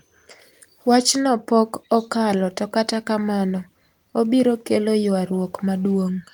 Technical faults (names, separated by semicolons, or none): none